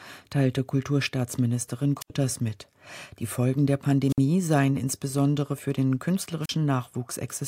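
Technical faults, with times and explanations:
2.00–2.10 s, 4.09–4.19 s and 6.43–6.50 s: wireless microphone squelch dropout. The radio link weakens, hiss swells, and the receiver's squelch mutes the output for about 77, 56 and 38 ms. The second gap falls just before "seien insbesondere für den", and the third just after it.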